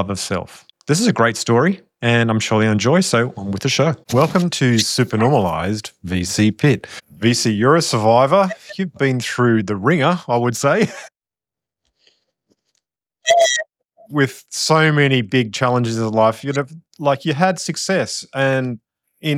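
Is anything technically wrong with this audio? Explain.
No, nothing stood out as technically wrong on listening to this audio.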